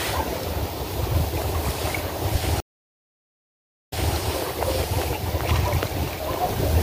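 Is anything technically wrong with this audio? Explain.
Yes. From 2.60 to 4.15 s the sound drops out for about 1.32 s, then resumes 0.24 s earlier, repeating material. This stream reconnect comes from a broken connection and a fresh decoder starting mid-stream.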